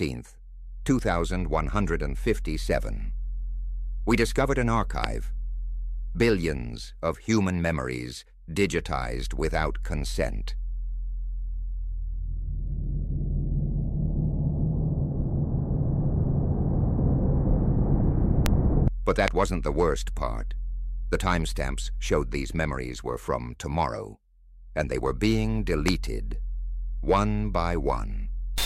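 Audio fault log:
5.04, 18.46, 19.28 and 25.88 s, loud pop: a sudden voltage step or pulse, likely from a plug, switch, static discharge or driver glitch, entered the signal path four times. Each lands as a single sharp pop or thump lasting about 20 ms and peaking roughly 25 dB above the surrounding audio, the last somewhat lower at about 20 dB. The sound continues underneath each one, and the two at 18.46 and 19.28 s fall less than a second apart.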